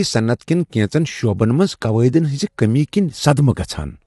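Speech, rough and grainy throughout, likely from low-delay AAC compression consistent with about 32 kbps; a spectrogram shows noise between blurred harmonics and nothing above 11.6 kHz.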